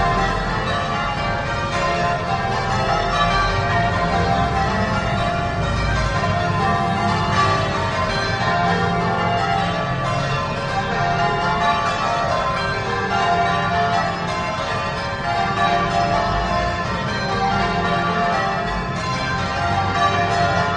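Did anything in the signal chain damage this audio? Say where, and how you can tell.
No, nothing in the signal chain audibly damaged this audio. Across the whole recording, no stage from capture through to playback leaves any audible trace.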